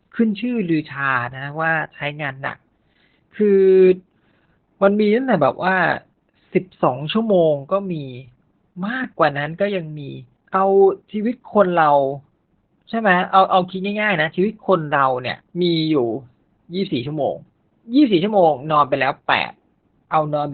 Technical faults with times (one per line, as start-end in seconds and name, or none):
0.00-20.53 Opus voice compression